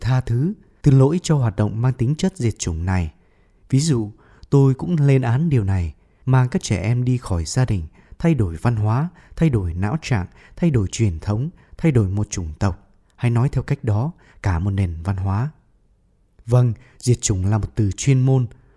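No technical fault can be heard anywhere in this speech recording. The speech carries on from beginning to end with nothing in the signal calling for comment.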